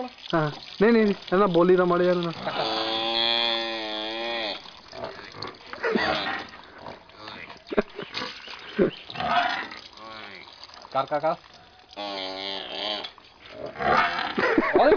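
No technical faults are audible.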